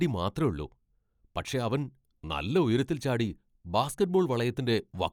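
The speech contains no audible technical faults.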